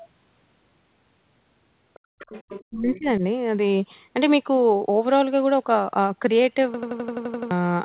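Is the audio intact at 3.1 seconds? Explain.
No. At 3.1 s the sound falls inside speech suppressed in double talk, from 2.70 to 3.23 s. The echo canceller likely mistook overlapping talk for echo and turned the talker down, leaving dips of up to about 25 dB across roughly 0.4 s.

Just before, from 2.95 to 3.04 s, there is the other side's voice leaking through. Residual loudspeaker sound likely slipped past the echo canceller into the microphone, giving a faint second voice about 20 dB below the talker that ends shortly before 3.1 s.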